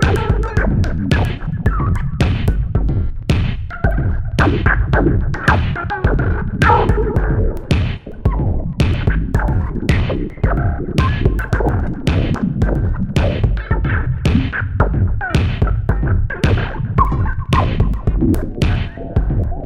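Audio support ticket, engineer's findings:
Drift correction step, 5.65–6.59 s. Playback slows 5.2% and pitch drops 93 cents, just under a semitone, then snaps back to normal. Likely a clock-sync resampler stepping its rate to refill its buffer. On a spectrogram, all harmonic lines shift down together, with sharp vertical edges at both ends. On the waveform, the periods are visibly stretched for 0.94 s.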